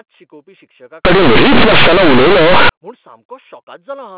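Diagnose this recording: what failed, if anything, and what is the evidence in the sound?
Sample-format conversion failed from 1.05 to 2.69 s: companded audio read as linear. The speech turns into very loud, buzzy distortion, with heavy noise in the pauses. Mu-law bytes are played as plain 8-bit samples without expansion. Each sign change throws the waveform across half its range.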